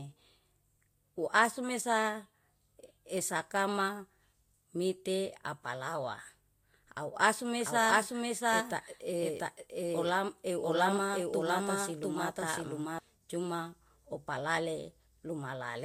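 From 7.61 s to 12.99 s the speech is heard twice: a second, equally loud copy trails the original by roughly 0.7 s, with no fading tail or added room sound, and it cuts in and out abruptly at both ends. This is a doubled audio track, likely from the same signal being captured again through a slower path, or an edit leaving two copies laid out of step.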